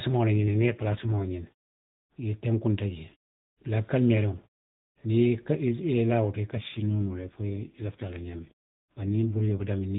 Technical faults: AMR rate drop

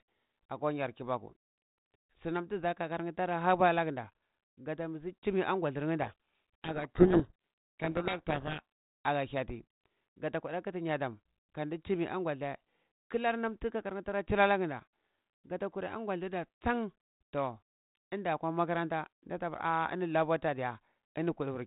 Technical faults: codec payload misread

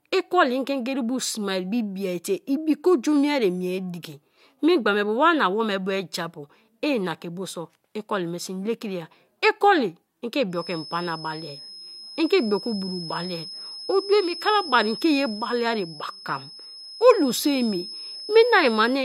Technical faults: feedback whistle

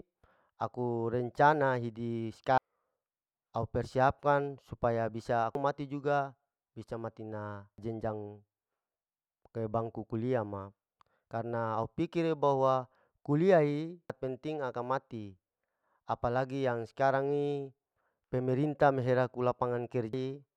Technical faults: damaged data in a compressed stream

